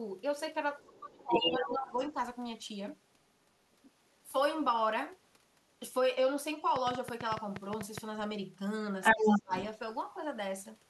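A speech recording with three kinds of fault. The other side's voice leaking through appears faintly at 0.8, 1.97 and 3.83 s, as loud as the talker from 1.3 to 1.74 s, and louder from 9.02 to 9.61 s. The likely cause is incomplete echo cancellation. Speech suppressed in double talk follows from 0.86 to 2.15 s and from 9.13 to 9.53 s. The talker drops by up to 20 and then 30 dB, likely because the canceller ducked both voices. A train of clicks runs from 6.76 to 7.99 s: about ten irregular pops, near nine per second, roughly 15 dB above the signal, likely from interference.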